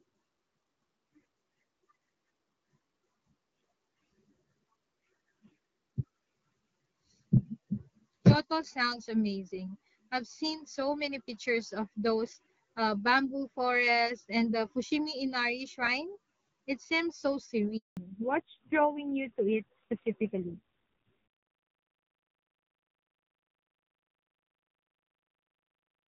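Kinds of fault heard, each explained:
Handover gap: At 17.77 s the speech cuts out for 200 ms, until 17.97 s, while the call switches from one network link to another and no speech frames get through. The sound dies away within a few tens of milliseconds rather than fading naturally, and whatever was said in that span is simply gone. On a waveform it appears as a flat stretch of near-zero amplitude; on a spectrogram, a clean vertical blank band across all frequencies.
Fallback to narrowband: Right after the gap, from 17.97 s to the end, the call drops from the clear wideband HD Voice sound heard earlier, which fits AMR-WB at 12.65 kbit/s, to an older narrowband codec. Nothing above 4 kHz remains, so the speech turns duller and more muffled, with a coarse, rough texture that points to a low AMR-NB rate around 5.9 kbit/s. A spectrogram shows energy up to about 7 kHz before 17.77 s, then a hard flat ceiling at 4 kHz.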